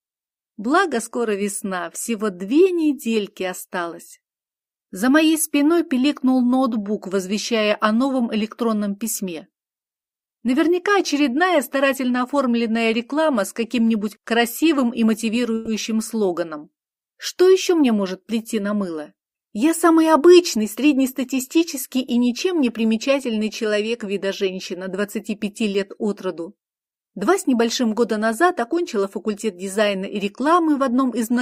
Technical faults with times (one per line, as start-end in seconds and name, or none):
15.55-15.70 call audio freeze